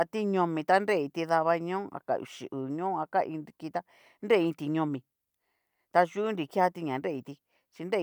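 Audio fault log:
No faults found in the speech recording.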